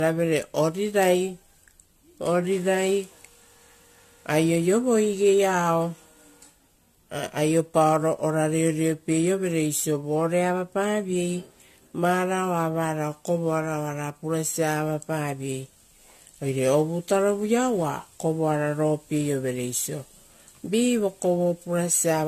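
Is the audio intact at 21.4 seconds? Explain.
No. At 21.4 seconds, as throughout the clip, the speech sounds swirly, smeared and hollow, with blurred attacks and nothing above 14 kHz. This is likely generation loss: the audio seems to have been encoded about four times with a lossy codec, in a way that fits a 64 kbit/s AAC-LC chain. Each pass quantised it again on a shifted frame grid, so the noise and spectral holes built up.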